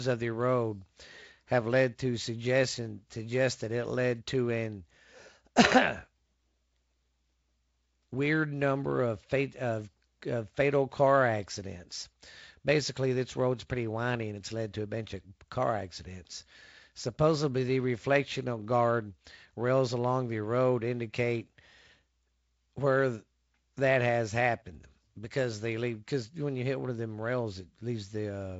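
Speech carried over G.722 wideband telephone coding at 48 kbit/s, with its bandwidth ending near 7.7 kHz and only light coding texture, and with no technical fault audible anywhere in the recording.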